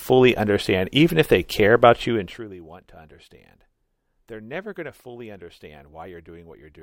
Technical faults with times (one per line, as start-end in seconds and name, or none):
2.07-2.54 zipper noise